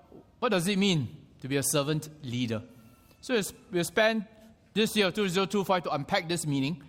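No technical faults can be heard anywhere in this audio; the signal stays steady and intact throughout.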